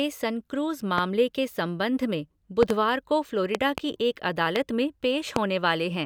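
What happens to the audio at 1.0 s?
A single loud pop lands between 0.98 and 1.00 s, peaking roughly 20 dB above the surrounding speech. It is a sharp, brief transient that sits on top of the talking, which carries on underneath without a break. The likely cause is a sudden voltage step or pulse entering the signal chain, such as a connector being touched, a switch, a static discharge or a driver glitch, which the downstream circuitry shapes into this short burst.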